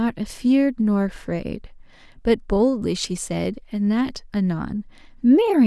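No technical faults are audible.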